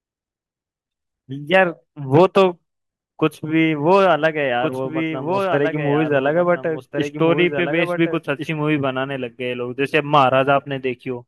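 From 4.61 s to 8.49 s the speech carries a doubled audio track: a second full-band copy trails the original by roughly a second and a half, sitting around 5 dB quieter. The likely cause is the same signal arriving again through a slower capture path. Unlike an echo or reverb tail, the copy has no decay or room colour, and it switches on and off abruptly at those boundaries.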